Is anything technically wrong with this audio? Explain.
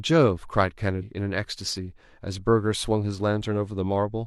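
Yes. From 0.98 to 1.03 s, compressed frames are skipped: the speech jumps ahead around 150 ms, about three 46.4 ms frames.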